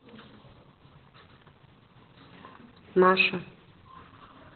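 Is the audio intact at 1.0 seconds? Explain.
No. At 1.0 s, as throughout the clip, Opus voice compression is squeezing the speech through its SILK coder in narrowband mode, which fits a bitrate around 8 kbps. Nothing remains above about 4.3 kHz, and the coarse excitation coding leaves the speech muffled, hoarse and slightly robotic.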